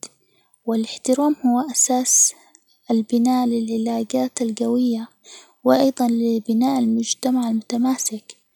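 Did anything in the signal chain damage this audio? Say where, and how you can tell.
No, nothing along the signal chain has audibly damaged this speech recording, and there is no sign of trouble at any stage between capture and playback.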